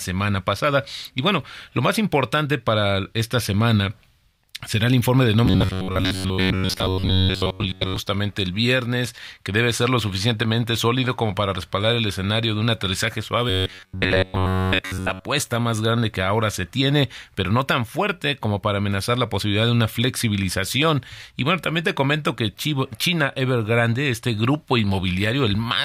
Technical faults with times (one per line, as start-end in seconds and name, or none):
5.46-7.96 robotic sound from repeated short buffers
13.50-15.25 robotic sound from repeated short buffers